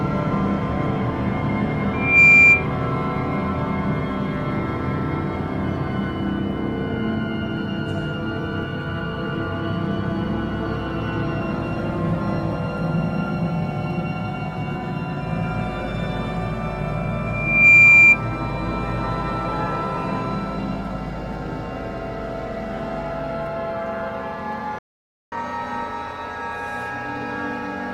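A microphone picked up the loudspeaker it feeds, so a 2.4 kHz loudspeaker feedback squeal builds over roughly 0.3–0.4 s to about 15 dB above the audio, at 1.93–2.67 s and again at 17.26–18.18 s. The player likely ran out of data or had its thread blocked, causing a playback stall: the audio stops for 533 ms at 24.79–25.32 s. Catch-up at higher speed follows as the player resamples its backlog, running at 1.1 times speed with pitch raised about one and a half semitones from 25.32 s to the end.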